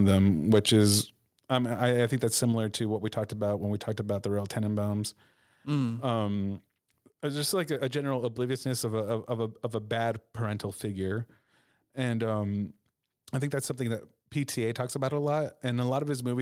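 At 1.02 s the call software likely cut the microphone input, a microphone volume stepped down fault: speech and background drop about 6 dB at once, just before "um I I think".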